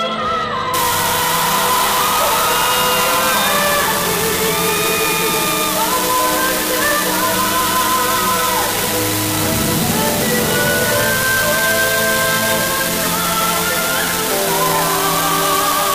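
From 0.74 s to the end, an unreliable data bit puts a steady crackling fizz over the sound. One marginal data line flips its bit at random, so each error adds an identical spike of about -7 dBFS. Unlike clipping, the spikes continue through pauses.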